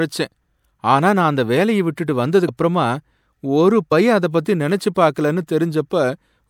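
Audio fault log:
2.47 s and 3.91 s: compressed frames skipped. The speech jumps ahead by whole 26.1 ms frames, roughly three frames (about 70 ms) at the first and one (about 30 ms) at the second. Overlapping neighbours smear each join into a quick blip, not a click.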